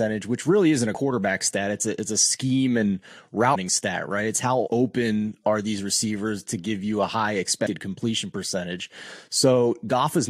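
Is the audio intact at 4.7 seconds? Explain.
No. Compressed frames are skipped at about 4.66 to 4.68 s. A run of encoded frames never reaches the output, either missing from the stream or rejected by the decoder as corrupt, so the speech jumps forward by roughly 150 ms, which fits a gap of around twenty frames. The join is a short smeared blip if the codec is lossy, where adjacent frames overlap, or a hard click if it is lossless, with a small chunk of speech simply absent.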